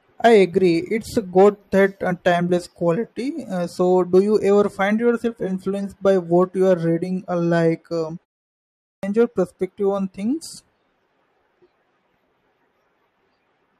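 Speech, with a clipped start after a pause. After "like um" there is a short gap of about 0.39 s. From 8.56 s to 9.03 s the next stretch is swallowed, and "your perspective on things" begins abruptly out of silence. About 471 ms is lost. The output device appears to drop into a sleep state during the brief silence. It then needs time to wake and lock again before it passes sound.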